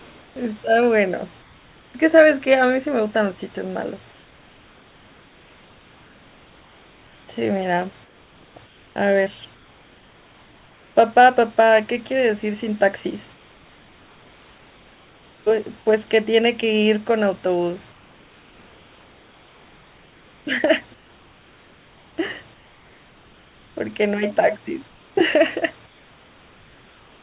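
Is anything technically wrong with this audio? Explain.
Yes. In the pauses at 0.00–0.36 s, 1.42–1.94 s, 4.12–10.96 s, 13.34–15.46 s, 17.92–23.76 s and 24.88 s to the end, the room's natural background turns into a flat, featureless hiss, about 2 to 3 dB quieter where it can be measured. This is likely comfort noise in place of the background: the sender stopped transmitting during silence and the receiver synthesised noise to fill the gap. The call path's narrow band, with nothing above 4 kHz, is also audible.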